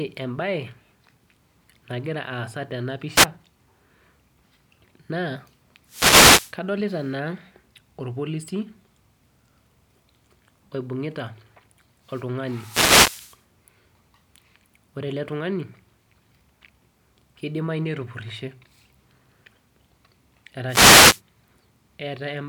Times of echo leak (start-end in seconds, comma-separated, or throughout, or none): none